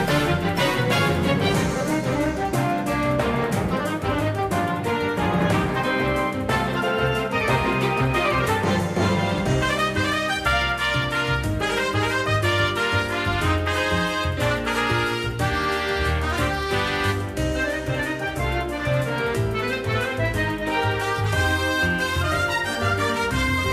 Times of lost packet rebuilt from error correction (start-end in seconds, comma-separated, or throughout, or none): none